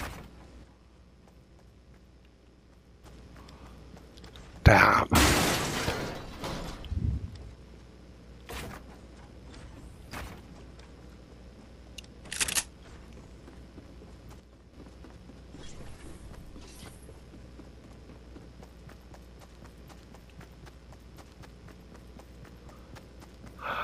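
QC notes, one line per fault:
0.64–3.04 s, one channel drops out: the sound abruptly falls about 6 dB, then snaps back to full level at 3.04 s. This is likely one stereo channel going silent, so the mono sum keeps only half of the shared material, and anything present only on the lost side vanishes.
14.40–14.73 s, one channel drops out: the same sudden 6 dB dip recurs for about a third of a second before full level returns.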